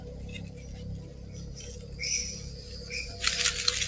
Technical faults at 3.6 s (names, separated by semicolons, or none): noise suppressor applied to music or sounds